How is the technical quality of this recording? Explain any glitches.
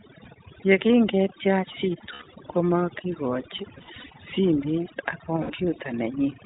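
The quality is rough, honestly: the speech has been through heavy processing and a low-rate voice codec, and it has three short dropouts that get patched over.

Throughout, there's overdone noise removal. The denoiser was set too aggressive, so it chops individual frequency bands right down whenever they look like its noise estimate, and it takes the softer parts of the voice with them. You end up with a near-dead background sprinkled with twinkly specks.

Also throughout is the iLBC codec. Everything above 4 kHz is gone, and there's a slightly rough, synthetic edge that's plainly audible. The texture fits iLBC's 15.2 kbps mode with 20 ms frames, each frame's excitation coded on its own without borrowing from the previous one.

Then there are the lost iLBC frames, at 2.12–2.24 s (about 100 ms missing), at 3.78–4.10 s (about 160 ms lost in bits scattered over 320 ms, the longest stretch around 70 ms), and at 5.42–5.52 s (about 80 ms). 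Each gap is filled by repeating the last pitch cycle mixed with noise, so it sounds like a held, faintly buzzy or breathy vowel. Because every iLBC frame stands alone, the voice snaps back right away.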